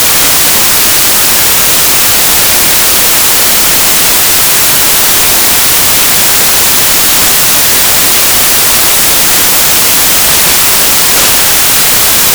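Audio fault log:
Throughout: samples built from the wrong bytes. Misassembled bytes push the fast-changing low bits into each value's high part, giving loud, harsh broadband noise, unlike hiss.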